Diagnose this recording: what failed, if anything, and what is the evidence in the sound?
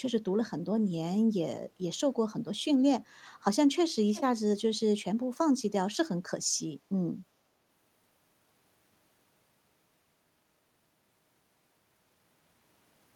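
What failed is call processing, and it's an echo leak. From 4.07 to 4.22 s there's a short, faint scrap of the speech coming back late, trailing the original by 349 ms and sitting something like 15 dB under it. That steady lag is the giveaway. The far end is likely on a loudspeaker, and its echo canceller let a bit of what its mic picked up slip through and get sent back down the line.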